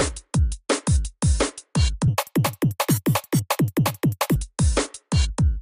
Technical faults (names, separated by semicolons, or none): wrong sample rate